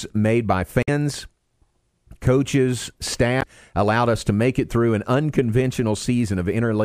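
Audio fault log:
0.83–0.89 s and 3.41–3.43 s, damaged data in a compressed stream: corrupted frames throw the decoder out of sync while it hunts for the next header, leaving a brief glitch after "made by" and before "allowed us to make".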